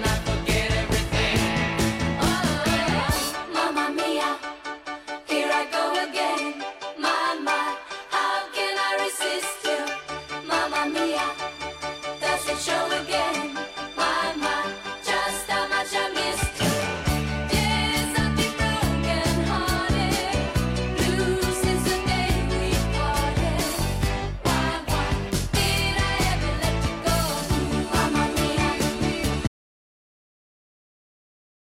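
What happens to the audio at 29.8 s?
At 29.8 s the sound is inside an audio dropout to silence that begins abruptly at 29.47 s and runs to the end of the clip. It is silence with no room tone, likely from an input lost while recording continued. Unlike a fade-out or noise gate, there is no decay tail.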